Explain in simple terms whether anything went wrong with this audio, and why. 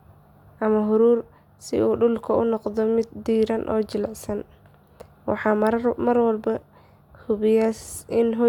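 Nothing went wrong here: the speech comes through steadily the whole way, with no dropouts, glitches or odd sounds to point to.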